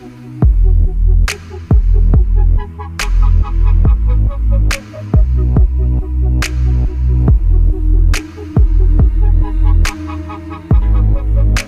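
No technical fault can be heard anywhere in the signal; the sound stays continuous and intact throughout.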